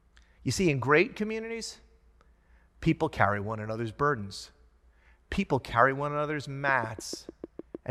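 After "people carry one another's", a train of clicks ticks at 6.6 per second from 6.69 to 7.76 s, likely interference: waveform spikes, vertical spectrogram lines.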